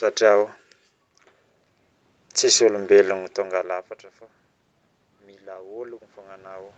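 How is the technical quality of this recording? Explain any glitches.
The recording has one glitch near the end, where the level of everything begins to swell.

Automatic gain rising, from 5.23 s to 6.78 s: the input level dropped by about 24 dB, so the automatic gain control judged the signal too quiet and began raising its gain step by step. Because the gain applies to the whole signal, the voice and the room noise behind it grow louder together, a gradual swell lasting roughly a second and a half until the clip ends.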